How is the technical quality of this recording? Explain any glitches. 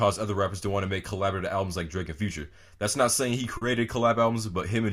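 One glitch is audible: a short concealed packet loss from about 3.57 to 3.63 s. Roughly 40 ms of audio failed to arrive in time, so the receiver synthesised a stand-in by extending the preceding sound, repeating its pitch period where it was tonal and substituting shaped noise where it was not, then crossfading back to the real signal. The result is a brief smear or wobble. On a waveform, the gap shows as a stretch of suspiciously regular, repeated cycles or smoothed noise. A spectrogram shows harmonics frozen flat or blurred across that span, with a soft seam where the genuine audio resumes.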